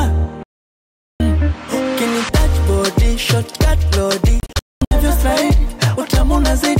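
At 0.43 s the sound cuts out until 1.20 s, a digital broadcast dropout. The receiver muted on bad frames, losing about 0.77 s. From 4.40 to 4.92 s it breaks into short holes. About 0.38 s is lost, the longest gap 0.22 s.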